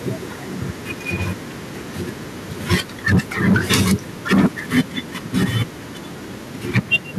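Microphone overload first appears at 2.71 to 2.75 s, then at 3.09 to 3.94, 4.31 to 4.46, 4.76 to 4.81, 5.42 to 5.62 and 6.75 to 6.96 s. The peaks overshoot by about 4 to 12 dB, likely from input gain set too high, so the converter shears their tops. The loudest syllables sound harsh and crackly. On the waveform they show as flat-topped plateaus, widest around 2.7 and 4.3 s. The spectrogram shows smeared broadband splatter above the speech harmonics.

The microphone volume steps down at 2.74 s by about 2 dB and at 6.78 s by about 3 dB. Each drop lands inside a clipped burst, likely the call software cutting input gain in response. Speech and background both fall in level at once. This shows as an abrupt, lasting drop in the waveform envelope.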